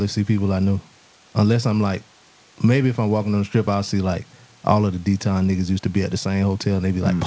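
The speech sits about 35 dB above a room noise and has no content above 8 kHz, which fits a wideband call codec such as G.722 at around 64 kbps carrying it through a normal call path.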